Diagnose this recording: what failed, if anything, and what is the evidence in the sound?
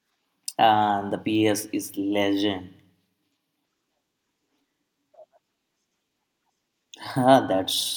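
Nothing failed; no fault is audible in this recording.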